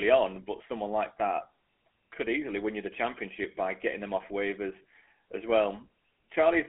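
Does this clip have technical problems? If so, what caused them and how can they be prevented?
Yes, the whole clip carries GSM full-rate codec damage, and it's plainly audible. The band runs about 250 Hz to 3.4 kHz with nothing above 3.7 kHz, which fits a 13 kbps GSM phone path. That codec rebuilds speech from a vocal-tract model fed by sparse, regularly spaced pulses, and that coarse excitation is what you're hearing. To avoid it, record locally or route the call over a wideband or network codec instead of a GSM leg.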